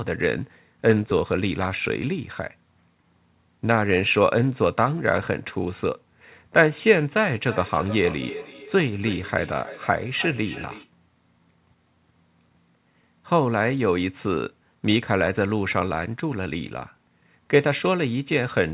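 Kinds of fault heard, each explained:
Feedback echo between two devices: From 7.35 s to 10.92 s the speech returns at a steady interval of roughly 300 ms, each pass thinner and more ringing, the strongest about 14 dB below the direct sound. A second device in the room replays this microphone's signal, which is picked up again, and neither echo canceller removes the other device's playback. Unlike a single echo or room reverb, the repeats recur at a fixed spacing.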